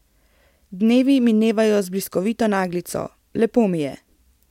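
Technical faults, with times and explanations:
No technical faults can be heard in this speech recording. There is nothing here that calls for a time or an explanation.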